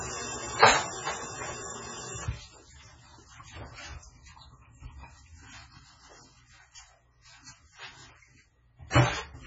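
Across the whole recording the sound is dull, with nothing above 7.6 kHz, and heavily watery and swirly, with metallic chirps and smeared attacks. This is likely MP3 compression at a very low bitrate, around 16 kbps, with weak frequency lines flickering between frames.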